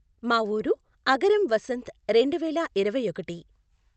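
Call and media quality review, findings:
No faults found in the speech audio.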